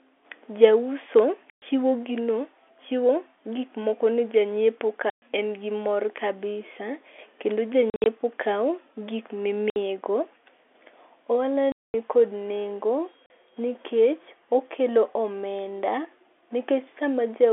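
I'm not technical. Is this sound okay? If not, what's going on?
No. It's packet loss filled with silence: bits of the speech drop out and are replaced by silent gaps, at 1.5 s (just before "chiwo gino chiwo"), 5.1 s, 7.9 to 8.06 s, 9.7 s (right after "kao gik"), 11.72 to 11.94 s (just before "nikod nengo"), and 13.26 s. The gaps come in steps of about 20 ms, which points to 20 ms packets going missing.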